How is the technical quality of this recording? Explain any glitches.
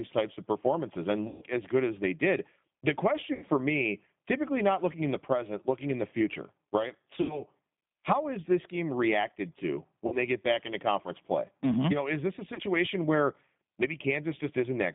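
Technical quality is limited by narrowband codec coding and five dropouts. Throughout, a G.729 codec confines the speech to roughly 150 Hz–3.6 kHz and its pulse-based synthesis leaves a plainly rough, synthetic edge. At 1.28–1.46 s (after "types of performances and"), 3.35–3.44 s, 7.21–7.43 s, 10.07–10.18 s (after "this game reacted to") and 12.54–12.62 s, VoIP packet loss is concealed by the speech codec, which extends the last sound into a fading buzzy tone or coloured noise.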